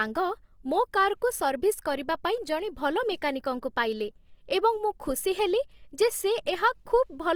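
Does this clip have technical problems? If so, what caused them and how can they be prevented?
Yes, the speech sounds grainy and rough from start to finish, likely from Opus compression. Content still reaches about 20.2 kHz, which fits the music mode at around 24 kbps filling starved bands with folded or noise-like energy. A higher bitrate would prevent this.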